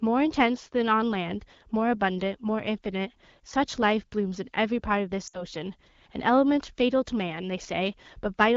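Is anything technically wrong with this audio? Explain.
Yes. Between 5.27 and 5.43 s there are lost AMR speech frames. About 60 ms of coded speech, which fits roughly three 20 ms frames, failed its error check. The AMR-WB decoder filled the gap by repeating the last good pitch and vocal-tract settings at falling gain. The sound briefly carries on from the last good frame and drops to near silence within about two frames, then recovers a little rough. A plain dropout would cut straight to silence instead of fading out. The surrounding AMR-WB coding at 12.65 kbit/s sounds clear.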